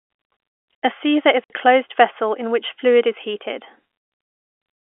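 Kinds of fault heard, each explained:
Packet loss filled with silence: Chunks of the audio stream never arrived, and the receiver played dead silence in their place rather than concealing the gap. The speech is cut twice. The first hole runs from 1.44 to 1.50 s and lasts about 60 ms. The second runs from 3.99 to 4.08 s and lasts about 90 ms. Both lengths fit whole 30 ms packets going missing. Each gap starts and ends abruptly, with hard edges against the narrow telephone-band sound.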